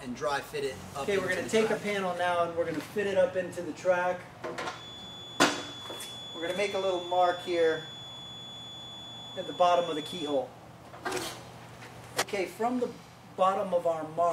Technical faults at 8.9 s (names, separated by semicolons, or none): feedback whistle